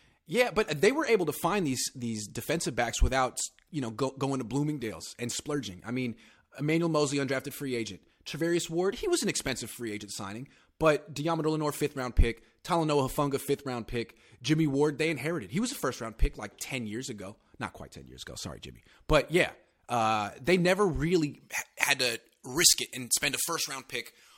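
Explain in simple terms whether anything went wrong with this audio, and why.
Something does go wrong near the end. From about 21.4 s, right after "uh they never really", to the end of the speech clip, the sound turns thin, bright and hissy, with the s sounds too sharp. This is pre-emphasis left on: the treble was deliberately boosted for recording or transmission, but the matching treble cut that should undo it on playback was never applied, so the high frequencies stay far too strong.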